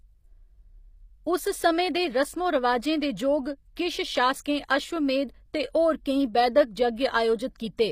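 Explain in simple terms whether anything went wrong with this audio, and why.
Yes, something went wrong, and it lasts the whole clip. The speech has a plainly audible coded quality: s sounds come out gritty and metallic, and nothing is heard above about 15.5 kHz. This is likely HE-AAC compression, which keeps only the lower sounds and fakes the top end by copying lower bands upward. Unlike a simple treble cut, the highs still sound bright but wrong, because they are rebuilt rather than removed.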